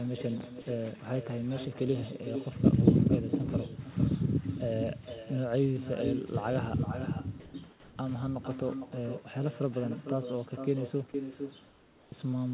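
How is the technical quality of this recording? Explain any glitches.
The recording has clear technical problems. An uncancelled echo runs through the whole clip, and several short gaps show a voice detector swapping real sound for synthetic noise. It all travels through a narrowband telephone path with nothing above 4 kHz, which gives the speech its muffled phone quality.

Echo with no canceller affects the full clip. The far end plays the call through a loudspeaker, its microphone picks that up, and nothing subtracts it before it travels back. Every stretch of speech is shadowed about half a second later by a copy roughly 9 dB quieter. Because the delay is that long, the copy sounds like a distinct repeat rather than a blur. It comes back thinner than the original.

Comfort noise in place of the background appears at 7.40–7.54 s, 7.70–7.96 s and 11.68–12.12 s. During pauses the sender stopped transmitting, and the receiver filled the gaps with generated noise. 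That is the likely cause of what you hear. In the first gap the real room sound turns into a smooth, featureless hiss at about the same level. In the second and third gaps that hiss drops by about 4 dB, so the background briefly sinks and goes flat before the live sound returns.

Sound dropped by the voice detector occurs at 11.12–11.14 s. The detector probably mistook some of the sound for background and stopped sending it. About 10 ms of real sound is lost, and steady noise briefly takes its place. The sound resumes as soon as transmission restarts.

Onset clipped by the voice detector occurs at 12.10–12.12 s, right where the long comfort-noise stretch ends. The detector was likely slow to register that speech had restarted. Because of that, the first 20 ms were never sent and filler noise covered them. The returning sound therefore begins abruptly, without its soft leading edge.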